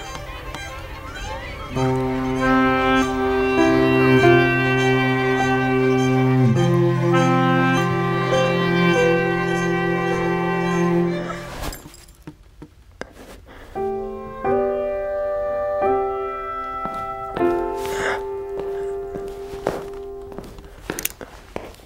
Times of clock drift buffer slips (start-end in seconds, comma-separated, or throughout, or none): none